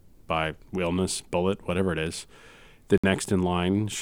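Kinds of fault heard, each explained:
Bluetooth stall: at 2.98 s the speech drops into 60 ms of clean silence, likely a starved wireless buffer, unlike a codec glitch, which smears instead.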